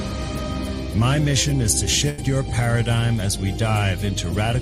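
A burst of packet loss hits the stream at 2.09 to 2.20 s: a run of packets never arrived in time, so the receiver stretched and faded the last sound across about 82 ms, then picked up with roughly 80 ms of the audio skipped.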